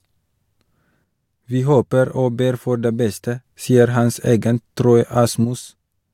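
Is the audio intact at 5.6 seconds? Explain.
No. From 5.45 s to 6.14 s one channel drops out. This is likely a lost stereo channel, so the mono sum loses half its contribution. Centred speech falls abruptly by about 6 dB, and anything present only in that channel vanishes.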